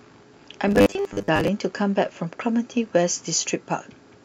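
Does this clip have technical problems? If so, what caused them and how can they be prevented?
Yes. Computer activity noise runs through the whole clip: a faint buzzing pulse at around 70 Hz, some 40 dB below the speech, as processor or peripheral load shifts the ground shared with the audio circuit. Using a USB interface with isolated power, or a ground-loop isolator, prevents it.

Robotic sound from repeated short buffers appears from 0.68 to 1.48 s, where the speech becomes a rigid metallic buzz at 100 Hz. This is likely caused by the software repeating a 10 ms chunk while roughly half the real audio is skipped. Enlarging the buffer or reducing system load prevents it.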